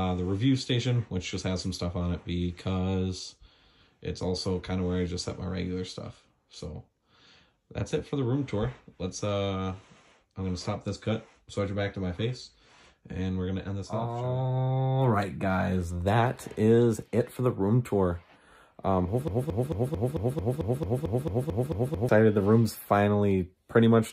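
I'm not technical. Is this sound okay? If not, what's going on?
No. There is a broken-record loop from 19.28 to 22.09 seconds. A tiny slice of the sound, about 0.22 seconds long, plays over and over, 13 times in a row, like a scratched record skipping. What likely happened is that the player or stream stalled and kept resending the last bit it had instead of moving on. Whatever should have been heard during those few seconds is missing.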